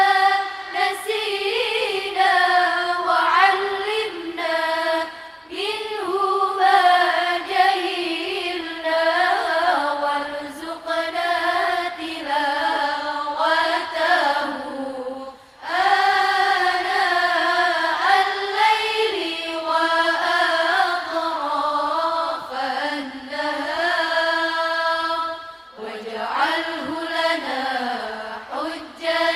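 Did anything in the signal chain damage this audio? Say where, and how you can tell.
No, no stage of the chain left an audible mark on the signal, and nothing in it points to damage at any point along the way.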